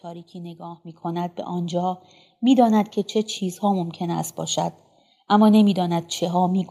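A speech recording with a microphone volume stepped up at 1.02 s. The level jumps by about 8 dB in one step. The speech and the background noise rise together. This points to call software raising the device's input volume after judging the microphone too quiet.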